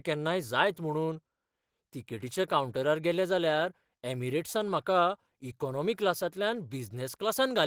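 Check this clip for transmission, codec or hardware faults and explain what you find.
Nothing here stands out as a fault; the speech carries on without a single glitch worth pointing to.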